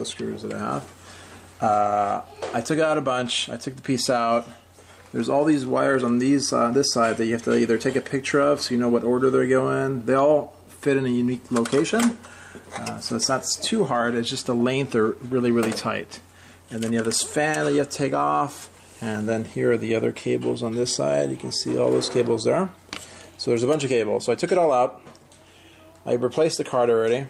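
Nothing in this recording stood out as a technical problem on listening.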